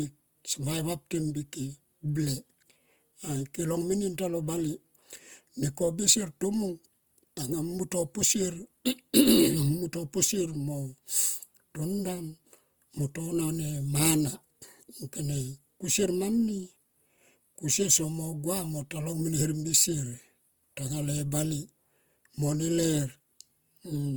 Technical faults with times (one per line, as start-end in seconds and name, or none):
0.00-24.17 Opus compression